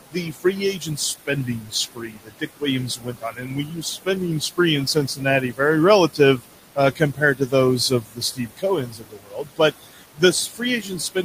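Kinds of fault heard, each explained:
Noise suppressor artifacts: The suppressor pulls down the bands it judges to be steady noise, frame by frame, by about 17 dB. The room noise, sitting about 12 dB under the speech, sinks in the gaps and comes back beneath each phrase. Unlike a plain noise gate, which opens and shuts the whole signal, this pumping is spread unevenly across frequency.
Speech cut by the noise suppressor: Here the suppressor mistakes parts of the speech itself for noise and turns them down with the background, by about 14 to 19 dB at worst, so soft consonants and word endings sound swallowed or faint. It happens in six stretches: 0.04 to 2.63 s, 2.96 to 4.07 s, 4.94 to 5.6 s, 6.13 to 6.44 s, 6.76 to 7.53 s, and from 7.9 s to the end. Unlike the steady artifacts, this removes actual speech rather than colouring the noise.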